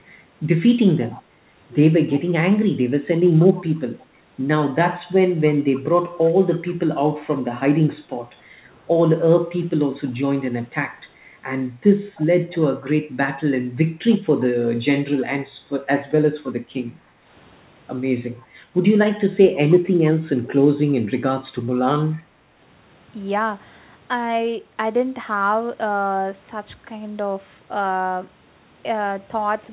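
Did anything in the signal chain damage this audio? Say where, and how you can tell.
Yes. A faint, delayed copy of the speech trails it by about 305 ms, well below the direct sound, at 0.8–3.64 s, 5.76–6.72 s, 10.06–10.54 s, 12.16–12.57 s, 18.41–18.46 s and 21.14–22.23 s. This is an echo leak in the call processing. The likely cause is a loudspeaker at one end whose echo canceller let some of the microphone pickup through, so it was sent back into the call.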